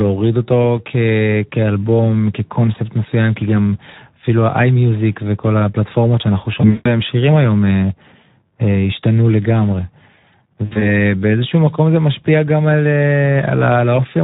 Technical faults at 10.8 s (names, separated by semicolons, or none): Speex codec; VoIP packet loss concealed by the speech codec